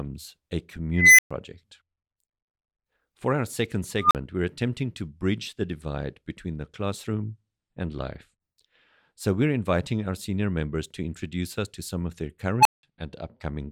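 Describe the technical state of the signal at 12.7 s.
An unstable filter fault spans 12.6 to 12.83 s, after "to some of their". Runaway recursive feedback swells a tone near 1 kHz within 51 ms. It clips, then falls silent for 0.18 s.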